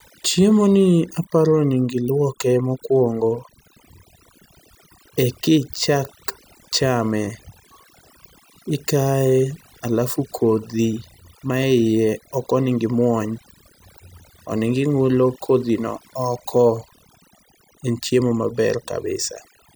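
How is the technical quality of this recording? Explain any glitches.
The recording has one persistent fault: overdone noise removal, present for the whole clip. The denoiser was set too aggressively, so any frequency band sitting near its noise estimate is pushed down or shut off, taking quiet parts of the speech with it. Between phrases the background drops to near silence flecked with twinkling specks. Unlike a noise gate, which mutes everything at once, this removes individual bands independently, causing that shimmering texture.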